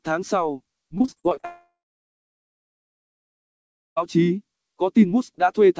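Packets were repeatedly lost or late between 0.98 and 1.45 s, so this audio, carried over a G.722 call path with nothing above 8 kHz, turns choppy and robotic there. Eight short holes, the longest 35 ms, are patched over about a third of that span, the classic sign of repeated packet loss. At 1.45 s the stream stops arriving, most likely a long network dropout: the last sound stretches into a fading buzz or hiss, then about 2.2 s of silence follows before audio returns at 3.98 s with that stretch gone.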